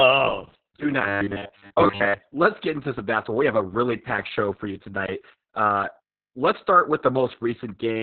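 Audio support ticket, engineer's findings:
Opus voice compression, whole clip. Muffled, hoarse, slightly robotic speech with nothing above 4.4 kHz. SILK narrowband at a bitrate that sounds around 6 kbps; the excitation is coded coarsely. Unlike a plain low-pass, the roughness lies in the voice itself, not just in lost treble.

Robotic buzz, 1.01–2.18 s, ending just before "let's get into some". Rigid, metallic tone at a fixed 100 Hz, consistent with a 10 ms chunk looped for most of that span. Likely cause: buffer underrun repeating short buffers. Unlike the codec roughness, the pitch holds fixed and is confined to this window.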